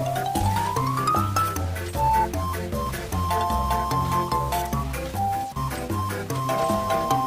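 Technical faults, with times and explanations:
Throughout, stuck bit: a distortion rides on the sound the whole way, rather than a clean overload, and the quiet gaps carry a persistent noise floor instead of silence. The likely cause is a single data bit held at a fixed value, so about half of all samples are shifted by that bit's weight in a pattern that follows the waveform, and small values flipping sign fill the pauses with noise.
Throughout, clock drift between sender and receiver: the timing never quite settles, with small stumbles scattered unevenly across the clip rather than at any steady spacing. The sending clock runs fast by about 4 percent relative to the receiving one, so the receiver's buffer keeps filling faster than it plays out. To keep from overflowing it has to discard short pieces again and again, and those discards are what break the flow.
0.07 to 7.26 s, repeated timing corrections: across this stretch the sound carries faint hiccups and a slightly uneven, hurried tempo, with each individual glitch small. 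These are the receiver's adjustments to the faster sender, effectively running the material at 103 percent by cutting brief segments out. Because every edit goes the same way but lands at irregular intervals, the result is a jittery pace rather than one clean jump.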